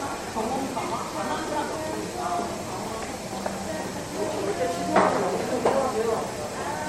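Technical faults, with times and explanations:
Throughout, generation loss: the audio was likely decoded and re-encoded about three times as MP3, fitting 64 kbit/s, each pass requantising on a shifted frame grid. Noise and spectral holes accumulate, leaving the sounds swirly, smeared and hollow, with blurred attacks and nothing above 16.3 kHz.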